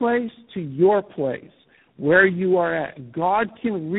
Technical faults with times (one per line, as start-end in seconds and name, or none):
0.00-3.98 tandem speech coding